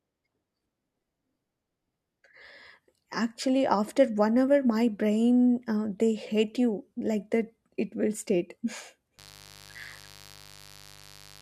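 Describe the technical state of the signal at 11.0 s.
At 11.0 s the speech sits over a steady, raspy buzz, roughly 25 dB below the speech. This is mains buzz, present from 9.18 s to the end of the clip at 11.41 s. It is built on 50 Hz, with sharp switching spikes arriving twice per mains cycle. Those spikes carry harmonics stretching up to several kHz, which gives the buzz its edge rather than a smooth hum.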